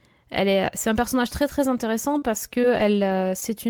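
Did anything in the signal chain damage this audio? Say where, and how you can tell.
Yes, at the network stage: scattered short gaps between 2.18 and 3.42 s, after "personnage très très intéressant". About four lost packets, the longest around 40 ms, were patched by extending the preceding sound, leaving brief smears and ticks instead of the clean silent holes a buffer underrun would leave.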